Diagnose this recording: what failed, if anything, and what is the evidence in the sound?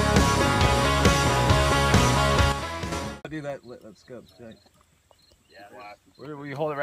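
At 2.52 s the whole signal, sound and background noise together, drops by about 8 dB in a single step, then returns to its former level at 2.92 s. This is a sudden gain jump. On the waveform the envelope steps down abruptly and steps back up 0.4 s later, with no slope at either edge. A spectrogram shows the same darker band across all frequencies. The likely cause is a digital gain change in the processing or driver stage, from a level setting or bit shift applied without a ramp.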